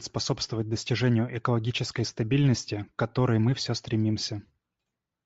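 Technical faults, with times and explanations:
Throughout, Bluetooth LC3 compression: the speech has the breathy, grainy upper edge of a low-rate transform codec, likely LC3 at around 32 kbps with 7.5 ms frames, where much of the upper spectrum is discarded and refilled with noise.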